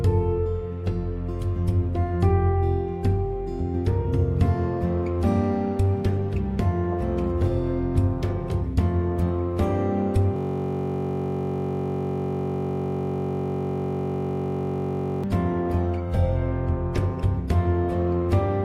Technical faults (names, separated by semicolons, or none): system hang loop